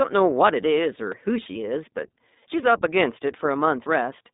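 Throughout, the speech sounds like the iLBC codec. Nothing passes above 3.7 kHz, and each 20 ms frame is coded alone, giving a plainly rough, synthetic tone consistent with 15.2 kbps.

At 1.12 s and 3.86 s there are jumps in the sound. These are likely a dropped buffer (overrun), with audio overwritten and skipped, about 20 ms first, then about 70 ms.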